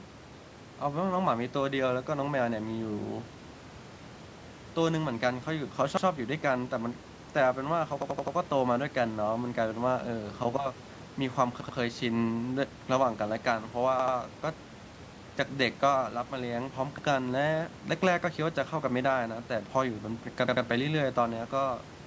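At 8.02 to 8.36 s a repeated buffer makes the speech stutter: one piece about 85 ms long, which fits a 4096-sample buffer, plays four extra times with a hard join at each repeat. Shorter double repeats follow at 11.61 to 11.78 s, 14.00 to 14.17 s and 20.48 to 20.65 s. New audio arrived late, so the device replayed its last block. The waveform shows identical segments, and the spectrogram shows copied blocks with vertical seams.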